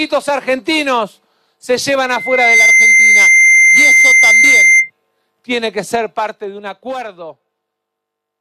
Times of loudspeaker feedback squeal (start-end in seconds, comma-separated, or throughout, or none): 2.04-4.90